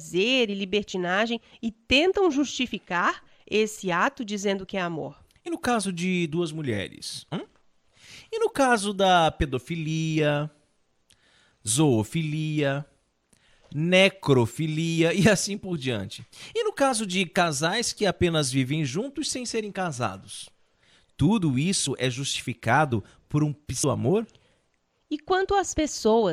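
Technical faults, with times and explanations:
1.28 s, 5.46 s and 23.83 s, damaged data in a compressed stream: three very short glitches in the speech, each under 20 ms, just before "e tentam justificar esse", just before "no caso de duas", and right after "é justificado por um". Bytes in the compressed stream are corrupt at those points, so the decoder misreads or refuses the frame, loses its sync, and searches until it locks onto the next valid frame header.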